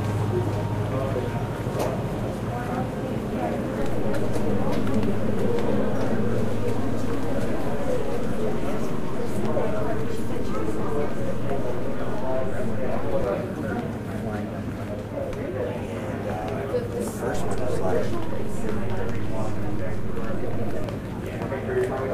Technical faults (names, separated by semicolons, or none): DC step